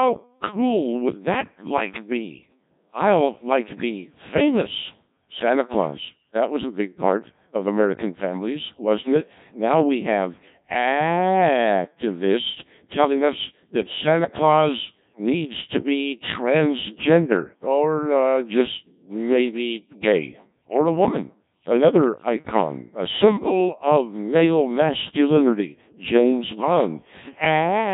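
Speech throughout has Codec 2 vocoder damage. The voice is rebuilt from sine waves, so it sounds heavily robotic and buzzy. Nothing remains above 3.8 kHz, and the bitrate is about 1.3 kbit/s.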